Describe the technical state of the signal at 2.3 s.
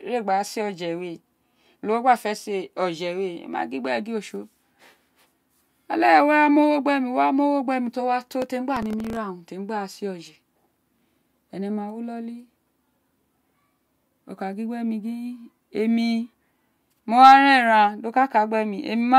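At 2.3 s the speech signal is intact, with no dropout, clipping, distortion or other fault audible at that moment.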